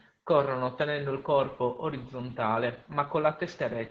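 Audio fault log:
throughout: Opus voice compression, heavy SILK-style coding makes speech hoarse and muffled; spectrogram shows nothing above 7.2 kHz and blurred harmonics, fitting about 10 kbps.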